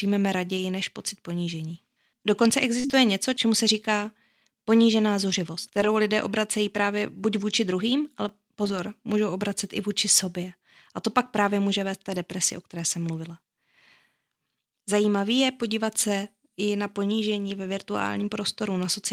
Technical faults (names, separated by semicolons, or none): lost packet rebuilt from error correction; burst of packet loss; repeated buffer